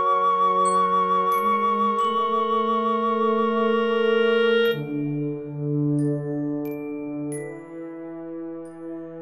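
From 6.09 to 8.44 s, crude rate conversion adds a gritty, inharmonic fizz to the music. Linear interpolation without filtering fits a 44.1 kHz to 48 kHz change.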